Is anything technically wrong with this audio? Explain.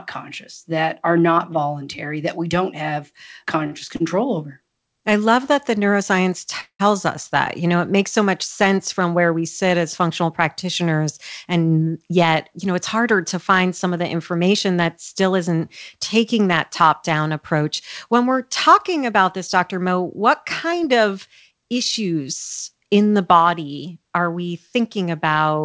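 Yes, there are four call-transport problems in this speech clip, all heard through a band that stops at 8 kHz, consistent with a G.722 call path.

From 3.64 to 4.02 s, between "that we don't have" and "over I love that", there's a run of repeated stalls (stutter). Three packet waits emptied the jitter buffer, and each time the receiver stretched the last sound, about 102 ms in total with the longest at 54 ms. Over a quarter of that stretch is filler, so it drags and hiccups.

At 6.61 to 6.81 s the call audio freezes. The sound is carried on for 188 ms, then fades, with the last 80 ms going silent before it picks up exactly where it left off. This was likely caused by packets held up in transit, leaving the jitter buffer empty.

From 17.54 s, right after "taking that top down", to 25.05 s, there's a jitter buffer speed-up. The receiver trims short pitch-period chunks, around 150 ms in all, to cut the built-up delay, so the speech runs about 2% fast at the same pitch.

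Inside that stretch, from 19.32 to 20.74 s, there are scattered short gaps. A few lost packets, roughly three, were patched by extending the previous sound for only around 20 ms in all, the longest about 10 ms. About 60 ms is actually missing, which you hear as brief ticks and smears.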